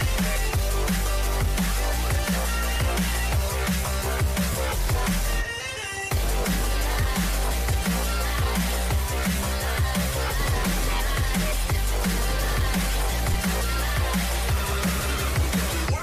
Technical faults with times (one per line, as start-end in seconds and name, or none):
2.75 lost LE Audio frames
4.52-4.55 lost LE Audio frames
13.33 lost LE Audio frames